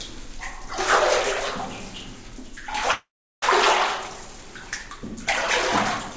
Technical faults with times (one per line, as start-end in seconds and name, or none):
2.92-3.44 call audio freeze